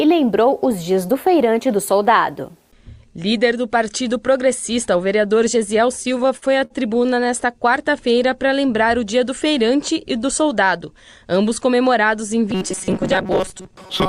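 From 6.03 to 7.43 s, packets arrived late and the jitter buffer kept running dry, causing repeated stalls (stutter). Across that stretch the receiver bridged many short gaps, the longest 52 ms, by extending the preceding sound. Nothing is lost, but the audio drags and hiccups.

From 12.50 s to the end, new audio likely arrived too rarely, so a buffer of roughly 5 ms was looped while real audio was skipped, giving robotic sound from repeated short buffers. About half the material is repeats, imposing a rigid, metallic 188 Hz buzz.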